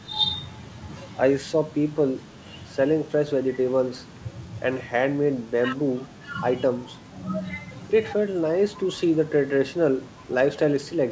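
Nothing goes wrong anywhere in the recording; the speech simply comes across as a wideband call would, with nothing above 8 kHz, which fits a G.722 link at 64 kbps.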